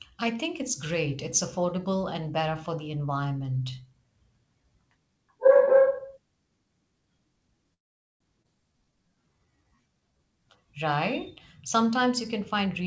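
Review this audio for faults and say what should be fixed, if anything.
Call audio freeze from 7.74 to 8.22 s: the sound stops for nearly half a second, almost all of it silent, then resumes where it left off with nothing lost. The likely cause is delayed packets draining the jitter buffer, adding about 0.46 s of latency. This can be prevented by giving the jitter buffer enough headroom for the network's delay spikes.

Skip ahead at 8.42 to 8.46 s: about 0.3 s of speech is gone, and the two sides are spliced with only a very short fill. Audio was dropped, either on the way or by the buffer when it overflowed, while later audio was already waiting. Draining excess delay gradually rather than dropping a block would prevent it.

Jitter buffer slow-down from 8.72 to 10.19 s: the speech runs at 82% speed with unchanged pitch, stretched by 265 ms through repeated pitch periods, giving drawn-out sounds. 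The buffer was rebuilding its reserve. A steadier target delay would limit this.

Jitter buffer speed-up from 12.40 s to the end: the speech plays at 117% speed, same pitch, with roughly 0.1 s trimmed out in short pitch-period pieces, so it sounds hurried. The buffer was shedding surplus delay. Capping how quickly the target delay swings would prevent it.

The G.722 call path limits the audio to 8 kHz, which is normal for that codec.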